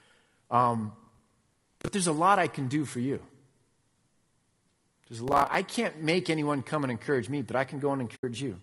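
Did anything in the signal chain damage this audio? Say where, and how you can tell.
Yes. The codec stage is the first culprit: the speech is rough and grainy throughout, with noise filling the gaps between harmonics and a thin, synthetic-sounding top band, which is most likely low-delay AAC compression such as AAC-ELD at around 32 kbps. Its short frames resolve pitch harmonics poorly, so on a spectrogram the harmonic stripes look smeared and grainy, with haze between them and a patchy, simplified region at the top.

The driver or buffer stage adds processor overload crackle from 0.99 to 1.88 s and again from 5.28 to 5.55 s. Each burst is a gritty tearing riding on the speech. The processor keeps missing its deadlines for short buffers of roughly 10 ms, a few dozen in a row in the first burst, and each miss replays a scrap of old audio with hard edges. On the waveform these show as small repeated chunks with abrupt discontinuities. 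On the spectrogram they show as thin vertical broadband lines, and both stop once the load passes.

In the network or transport path, AAC frame loss with muting leaves a brief hole from 8.15 to 8.24 s. Four frames, about 80 ms of audio, were lost, and the decoder zeroed their spectrum. The overlapping windows fade the sound out and back in. The waveform shows a smooth taper into near-silence and back out, and the spectrogram shows a clean blank gap with soft edges.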